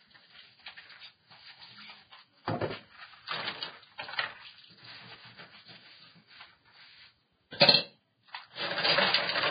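Vorbis compression runs throughout this recording of sounds: nothing survives above about 4.9 kHz, and what remains below that sounds hissy and grainy, with tones roughened and attacks smeared. The damage is heavy, and the likely cause is low-quality Vorbis encoding, consistent with a bitrate of roughly 16 kbps. At that rate the encoder drops the top band entirely and quantises the upper remaining detail so coarsely that it turns into noise-like texture of similar energy.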